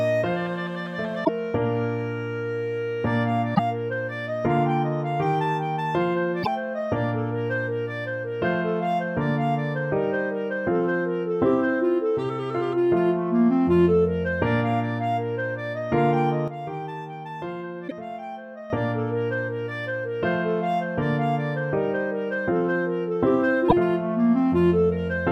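The audio carries two kinds of technical fault. Damaged data in a compressed stream produces brief chirps or squawks, each about 80 ms, at 1.21, 3.52, 6.40, 17.85 and 23.65 s. At each one the decoder meets corrupted bytes, loses frame sync and recovers at the next valid header. A sudden gain jump drops the level by about 9 dB at 16.48 s and restores it at 18.70 s. Sound and background noise step down and back up together, without any ramp, which likely points to a gain setting or bit shift applied abruptly.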